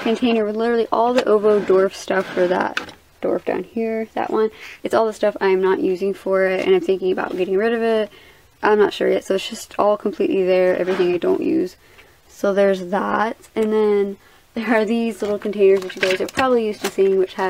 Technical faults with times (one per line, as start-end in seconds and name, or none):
none